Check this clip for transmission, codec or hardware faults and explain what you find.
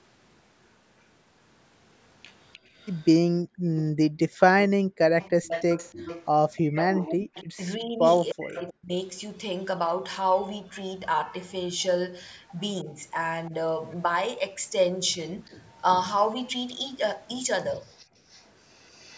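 There are three echo-canceller faults in this speech clip, all from a speakerphone in the call.

Echo leak shows up at 2.53–3.81 s, 5.21–8.73 s and 17.85–19.17 s. A copy of the speech comes back about 304 ms late. It's faint in the first and last stretches, but much stronger from 5.21 s. That's likely the speakerphone side's canceller letting its loudspeaker pickup slip through.

Background gated by the echo canceller runs from 2.59 to 4.99 s. The canceller clamped down on the microphone while the loudspeaker played, so the room tone drops out for roughly 0.7 s in total, as deep as about 37 dB, then snaps back.

Speech suppressed in double talk hits 7.11–8.93 s. The speech gets cut hard, by around 40 dB, for about a second in total. There's a much lighter dip at 12.84–13.54 s, just a few dB and very brief. The likely cause is both sides talking at once, which made the canceller duck everything.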